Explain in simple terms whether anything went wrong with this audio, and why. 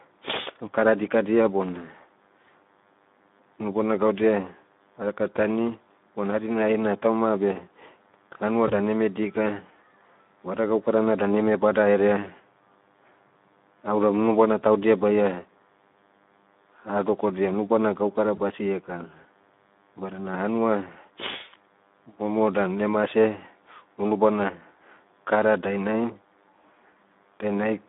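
Three problems can be heard in this speech recording.

A DECT cordless phone buzz runs underneath the whole clip. It is a faint, thin, steady buzz at 100 Hz. A nearby cordless phone or its base sends a short radio pulse every 10 ms, and the audio circuitry picks it up as sound.

The whole recording has also passed through the Speex codec, an older compression method for internet calls, with audible damage. The voice sounds hoarse and grainy. Everything is squeezed into a narrow phone band of about 200 Hz to 3.6 kHz, so the sound is thin and muffled.

VoIP packet loss concealed by the speech codec happens twice. The first dropout is at 8.67 to 8.72 s, just before "eme dika". The second is at 18.35 to 18.39 s, just after "hadokodia unubana gaukara". Each time about 20 ms of audio went missing, which fits a single lost packet. The decoder then guessed the gap by stretching the last bit of sound into a brief buzzy or noisy smear that fades. 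The voice sounds weak or distorted for a moment afterwards.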